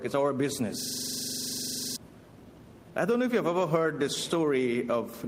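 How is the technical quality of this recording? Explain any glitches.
The recording has three timing faults: continuous clock drift, a train of timing corrections running through it, and one system hang loop near the start.

Clock drift between sender and receiver: the sending device's audio clock runs roughly 4 percent fast relative to the receiver's. Because audio arrives faster than it is played out, the jitter buffer keeps filling, and the receiver must discard material to keep up. This drift underlies the whole clip.

Repeated timing corrections, from 0.01 s to 5.11 s: to offset the sender running at 104 percent speed, the receiver repeatedly trims short pieces of audio, always in the same direction and at uneven intervals. Each trim is small.

System hang loop, from 0.81 s to 1.96 s: the computer or its audio driver froze while the sound hardware kept cycling through one ring buffer. 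A single 42.67 ms piece, which fits a 2048-sample buffer, plays 27 times in a row, producing a rapid mechanical stutter at 23.4 Hz. Roughly a second of the real audio is lost behind it.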